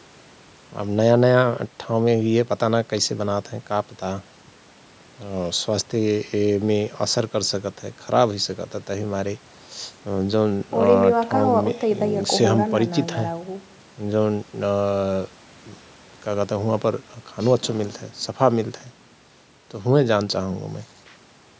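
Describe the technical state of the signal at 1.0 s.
At 1.0 s the speech is intact, carried cleanly through the call's microphone processing with its normal trimming of the lowest bass and nothing above 8 kHz.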